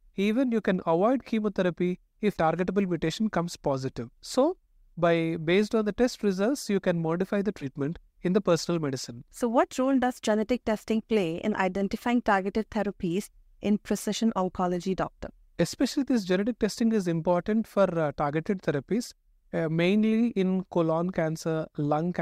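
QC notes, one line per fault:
7.61–7.65 s, compressed frames skipped: the decoder dropped a couple of whole compressed frames, either missing from the stream or rejected as damaged, and carried on from the next good one. Because the jump points to a 10 ms frame, around 20 ms of speech vanishes between "you can modify the" and "in the personal medicine". The speech lurches forward at the join.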